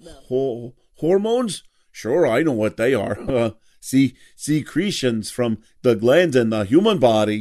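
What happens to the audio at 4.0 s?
Nothing goes wrong at 4.0 s; the speech there is intact, with no dropout, click, distortion or other fault.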